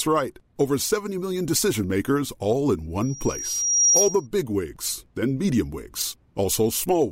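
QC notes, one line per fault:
3.01–4.27 s, loudspeaker feedback squeal: right after "decision makers all in" a single tone at about 5.7 kHz starts creeping up, swelling over roughly a second until it's sitting about 5 dB above the speech, then it cuts out before "wigs then medium". That's the mic hearing its own loudspeaker, with the loop gain tipping past one at that frequency, so it keeps feeding itself and grows into a thin, piercing squeal.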